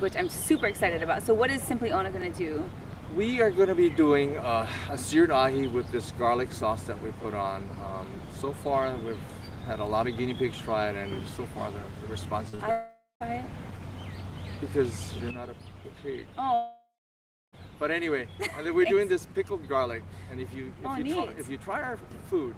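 At 2.22 s there is a small click. The same happens at 7.23 s and 12.24 s. These are overlapping chunks. The audio was handled in 5-second blocks, and each block starts 12 ms before the previous one ends. That 12 ms is played twice at every join. The repeat is too short to hear as an echo. It comes across as a tick or tiny stutter at a steady 5-second spacing.

Just after, from 12.49 to 12.61 s, come two short concealed packet losses back to back. About 40 ms of audio went missing each time. The receiver covered each gap by extending the last sound for roughly 40 ms, then blending back into the real signal. The result is a brief smear or wobble. Any short transient in that span can drop out.

At 12.71 s a longer hole begins, lasting until 13.22 s. This is likely a long network dropout, with about half a second of audio missing. The decoder first stretches the last sound into a fading buzz or hiss. 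For the final 180 ms only silence remains. The sound then resumes further along, with the lost part gone.

At 15.31 s the level falls abruptly by about 8 dB. It stays lower to the end. The sound and its background noise drop together, in a single sample, with no fade. That points to a sudden gain jump, a digital gain change applied without a ramp. A click may be heard at the switch.

From 16.54 to 17.55 s there is a second, longer gap of about one second. It has the same shape: a fading synthetic continuation, then about 0.66 s of silence. The audio comes back past the missing stretch.

At 22.26 s one more overlapping-chunk tick lands, still on the 5-second grid.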